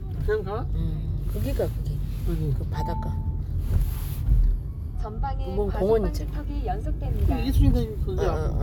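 Nothing stood out as a technical problem on listening to these everyday sounds.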